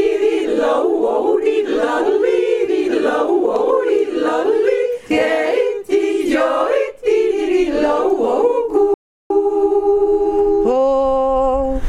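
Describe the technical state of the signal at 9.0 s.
At 9.0 s the signal is inside a playback stall running from 8.94 to 9.30 s, about 0.36 s in all. The sound stops in mid-flow and the output falls silent until playback picks up again. The likely cause is the player running short of buffered data or its thread being blocked. Unlike a brief dropout of a few milliseconds, this is a sustained, clearly audible halt that holds silence for over a third of a second.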